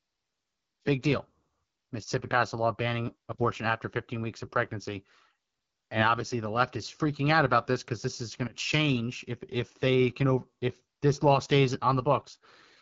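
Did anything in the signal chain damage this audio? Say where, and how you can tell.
Yes, at the codec stage: an AMR wideband (HD Voice) codec across the whole clip. The speech sounds rough and raspy throughout, with nothing above 7.5 kHz. That roughness fits one of AMR-WB's lowest modes, around 8.85 kbit/s, where the pulse-driven vocal model gets too few bits.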